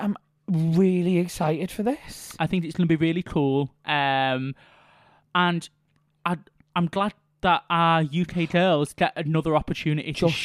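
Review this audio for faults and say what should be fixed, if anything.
Nothing needs fixing; no faults were heard.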